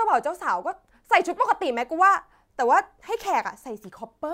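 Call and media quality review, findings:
Nothing stood out on listening to this speech recording.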